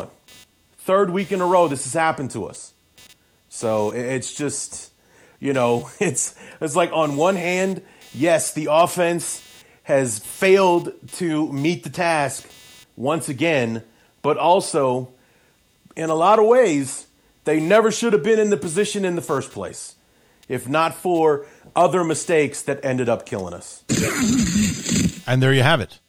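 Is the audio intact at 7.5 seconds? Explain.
No, not quite. At 7.5 seconds you're hearing computer activity noise, and it runs through the whole clip rather than just that moment. The processor, graphics card or mouse changes load, and that shifts the ground the audio circuit shares with it. The result is a buzzing, chirping or scratching that pulses at roughly 300 Hz, sits something like 35 dB under the speech, and rises and falls with the computer's workload rather than with the speech.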